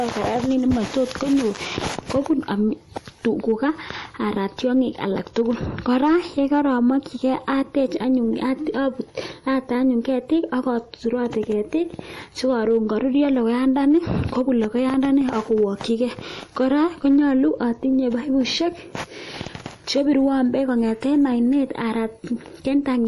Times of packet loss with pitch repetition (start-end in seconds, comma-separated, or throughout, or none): none